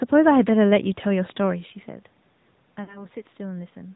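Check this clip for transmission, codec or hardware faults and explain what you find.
Three faults are audible: mobile codec damage throughout, one pop, and a short dropout.

The AMR narrowband mobile codec colours the whole clip. At a bitrate around 10.2 kbps, the speech is rebuilt from a vocal tract model and a few pulses per subframe. Nothing above 4 kHz survives. The result is plainly buzzy and synthetic.

A loud pop lands at 1.30 to 1.32 s. It is a single sharp click, roughly 5 dB above the speech. The likely cause is a voltage step from a switch, plug or static discharge. The speech carries on beneath it. A level change near 1.5 s sounds like the talker moving.

Lost AMR speech frames occur between 2.84 and 3.04 s. About 40 ms of audio is missing, which fits two 20 ms frames. The decoder repeats its last good settings with falling gain. The sound smears and dips, then returns weak or rough for a moment.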